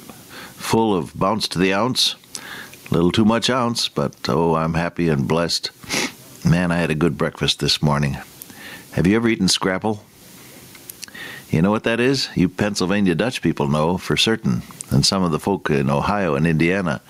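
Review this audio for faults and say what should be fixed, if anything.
Gain pumping runs throughout. The gain swings around 20 dB. Likely cause: excessive input gain driving a fast limiter. Lower the input gain and slow or relax the limiter.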